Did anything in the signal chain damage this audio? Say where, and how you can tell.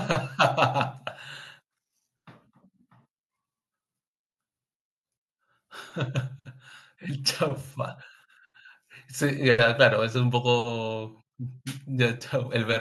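No, nothing along the chain seems to have hurt this speech recording, so there's really nothing to point at here.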